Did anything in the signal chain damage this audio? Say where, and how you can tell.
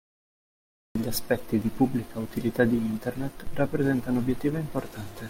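Yes. The clip has a cut-off start at the capture or recording stage. Digital silence runs from 0.0 to 0.95 s, then the speech begins abruptly mid-sound, just before "aspetti di pubblica utilità", with no natural attack. The recording began late and caught the phrase already in progress.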